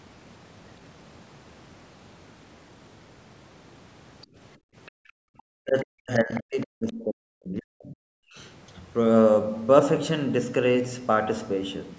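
From 4.58 to 5.29 s the room background is gated by the echo canceller. While the far end was playing through the loudspeaker, the canceller clamped the microphone path, and the ambient sound falls away by as much as about 40 dB for roughly half a second in total within that span. It comes back once the canceller releases.

Inside and just after that gated stretch, short traces of the other side's voice leak through, at 4.86 to 4.91 s and 5.38 to 5.42 s. Each is only a few tens of milliseconds long and sits far below the local speech level. The likely cause is residual loudspeaker echo that the canceller failed to subtract from the microphone signal, so fragments of the far-end talker survive as faint scraps.

From 5.57 to 8.18 s the local speech is suppressed in double talk. Both parties were likely speaking at once, and the canceller, unable to tell its own talker from the returning echo, attenuated everything. 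The voice dips hard, as deep as about 40 dB, and is chopped up over roughly two seconds of that interval. During the same stretch, two more brief far-end leaks appear, at 6.35 to 6.40 s and 6.61 to 6.66 s. The first is noticeably stronger than the others but still well beneath the speech.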